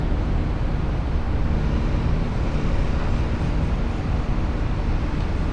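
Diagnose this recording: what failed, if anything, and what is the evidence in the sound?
Nothing failed in this recording, and the sound shows no evidence of a fault at any stage.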